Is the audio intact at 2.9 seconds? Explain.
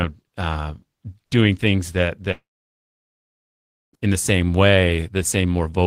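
No. From 2.31 to 3.95 s, after "uh doing things that", audio is missing, and a brief fading buzz or hiss decays into about 1.5 s of silence before "in the same", likely a long network dropout.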